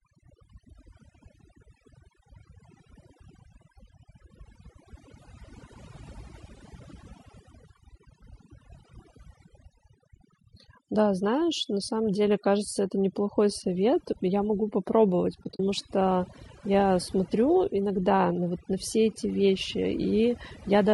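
From start to finish the speech has been through overdone noise removal: a reduction stage set far too aggressively keeps pulling individual frequency bands down whenever they sit near its noise estimate. The background drops and breaks up into twinkling specks, and quiet parts of the voice are carved away.

The whole clip also carries plainly audible coding damage, likely from low-delay AAC compression (AAC-ELD) at a low rate that fits roughly 32 kbps. Its short frames resolve pitch harmonics poorly, so the voice turns rough and grainy, with noise filling the gaps between harmonics and a dulled, synthetic-sounding top band.

Between 15.43 and 15.60 s comes AAC frame loss with muting: several coded frames went missing and the decoder replaced their spectrum with zeros. About 100 ms of sound disappears in patches across that 160 ms stretch, the longest run a few tens of milliseconds, each gap a soft-edged dropout.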